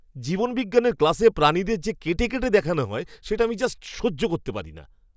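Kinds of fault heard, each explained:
Nothing to flag here, as no technical faults turn up anywhere in the speech.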